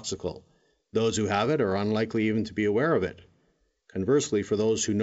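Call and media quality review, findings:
No faults found: speech carried over G.722 wideband telephone coding at 64 kbit/s, with bandwidth reaching about 7 kHz and at most a faint upper-band hiss from the coding itself.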